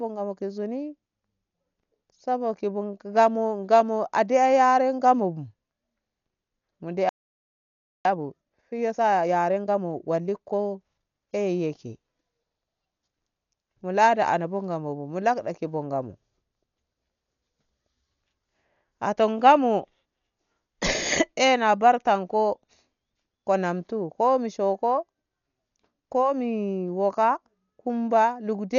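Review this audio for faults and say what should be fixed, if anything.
The speech is dull throughout, with nothing above 6.9 kHz and heavy rough, fluttering noise around tonal sounds, likely from Dolby Digital compression. That points to an encoder at a low bitrate near 48 kbps narrowing the band, with the decoder filling stripped frequency lines with dither noise. Encode at a higher bitrate to keep the full band and mantissa detail.

From 7.09 to 8.05 s the audio goes silent for about 0.96 s, then resumes. This playback stall was likely caused by the player running out of buffered data or its output thread being blocked. Increase buffering and keep the audio thread free of blocking work.

From 8.05 to 11.05 s the speech runs at 1.25 times normal speed at unchanged pitch. This is time-compressed catch-up, where the player cuts out and cross-fades small segments to drain the backlog. Preventing the stall avoids this catch-up.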